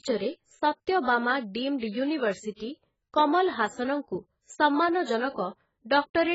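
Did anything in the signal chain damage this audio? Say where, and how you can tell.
Yes, at the codec stage, likely AAC compression at a very low bitrate, something like 12 kbps. Throughout, the speech sounds dull and smeared with a fizzy, warbling texture on sibilants. A spectrogram shows nothing above 7.6 kHz.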